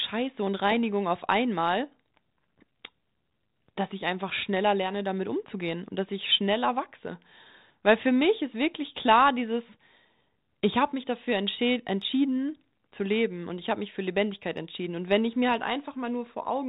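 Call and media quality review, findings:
No faults found; speech on the G.726 path sounds as expected.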